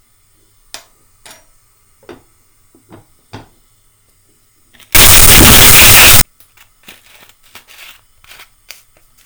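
From 4.95 s to 6.21 s the sound turns into a wall of harsh, very loud distortion, the mark of signed and unsigned mixed up, likely from 16-bit samples read with the wrong sign convention. Flipping the top bit makes every zero crossing leap across the whole range, so quiet moments blare as loudly as peaks. Unlike ordinary clipping, which only flattens loud peaks, this garbles even near-silence.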